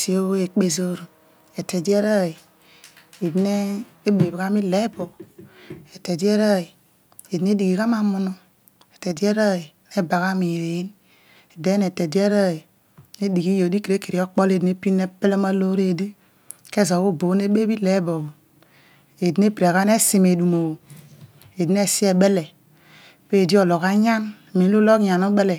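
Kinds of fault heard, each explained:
One channel drops out: from 9.12 to 9.17 s the speech briefly dips by about 6 dB, a short step in level lasting 50 ms before it returns. The likely cause is one side of a stereo pair going silent, so once both sides are folded to mono, whatever they shared is only half as loud. On a waveform this shows as a sudden narrow band of reduced amplitude with sharp edges; a spectrogram shows a uniform darkening across all frequencies for that instant.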